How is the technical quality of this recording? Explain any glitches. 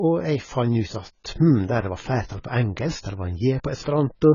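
Technical quality is poor, with heavy lossy-coding damage from start to finish. The AAC compression, likely AAC-LC, discards everything above 7 kHz and coarsely quantises the rest, which fits a bitrate around 16 kbps. Speech sounds dull and smeared, with warbling, fizzy sibilants. A spectrogram shows a hard ceiling at 7 kHz.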